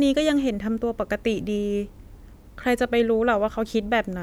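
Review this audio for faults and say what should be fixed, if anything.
Nothing here needs fixing, since no faults turn up anywhere in this clip.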